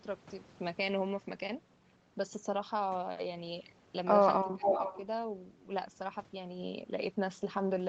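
From 4.43 to 4.74 s the voice dips hard, down by something like 20 dB at its worst, with about a fifth of a second chewed up in total. That's speech suppressed in double talk, likely the echo canceller ducking the near talker because it couldn't tell them apart from the far side.

Overlapping that, from 4.64 to 5.0 s, there's an echo leak: a copy of the voice comes back roughly 447 ms late and only a few dB quieter than the speech itself, likely from a loudspeaker end whose canceller didn't scrub its microphone clean.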